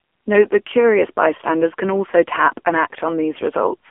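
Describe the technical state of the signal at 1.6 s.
At 1.6 s the speech carries the AMR narrowband mobile codec, which is present for the whole clip rather than at this moment alone. The codec rebuilds the voice from a vocal-tract model excited by sparse pulses, and here the damage is heavy: a buzzy, synthetic quality consistent with a low mode around 6.7 kbps. The line band runs from about 250 Hz to 3.4 kHz, and nothing above 3.5 kHz survives, so the sound is thin and muffled.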